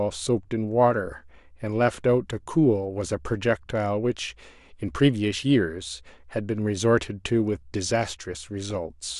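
Right near the end, from 8.36 to 8.75 s, the speech picks up DAB burbling. Weak reception let bit errors slip past error correction into the MP2 data, at a fraction of a percent, so wrong samples put short blips of noise into single sub-bands.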